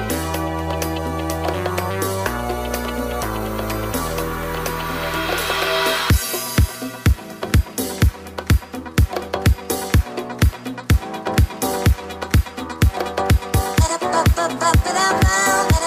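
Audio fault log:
No technical fault can be heard anywhere in the signal, which stays continuous with intact bandwidth.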